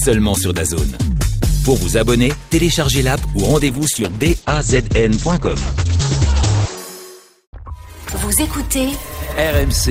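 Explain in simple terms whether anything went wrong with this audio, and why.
From about 3.69 to 6.83 seconds the sound turns rough and muffled, then clears. This is a call bitrate drop: the connection seemed to shrink, so the encoder squeezed the audio into far fewer bits and cut away everything above about 8 kHz until it recovered.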